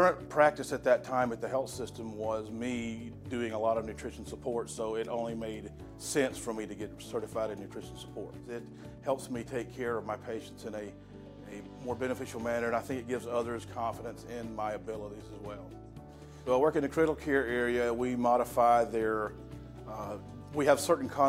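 No technical faults are audible.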